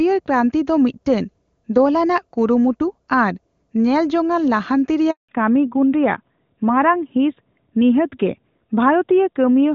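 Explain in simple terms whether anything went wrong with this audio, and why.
Right after "ᱠᱩᱨᱩᱢᱩᱴᱩ ᱟᱨ ᱧᱮᱞᱡᱚᱝᱼᱟᱱ ᱞᱟᱦᱟᱱᱛᱤ", at 5.11 s, the speech suddenly stops and there is complete silence for 0.18 s, until 5.29 s. This is a handover gap. The phone was passing the call from one network connection to another, and while it switched, no pieces of speech got through. Whatever was said during that moment is gone for good.

When the speech returns at 5.29 s, it sounds duller and rougher, and it stays that way until the clip ends. This is a fallback to narrowband. Before the switch, the call was using the clearer HD Voice system, and the speech sounded crisp. After the handover, the call dropped to an older, more basic phone system that removes every sound above 4 kHz, which takes away the brightness and sharpness of the speech.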